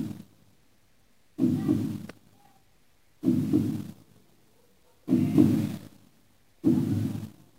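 At 5.35 s the level jumps up by about 4 dB in a single step and stays there until 5.96 s, with the background noise rising right along with the sound. That's a sudden gain jump, likely a digital gain setting applied with no ramp between samples.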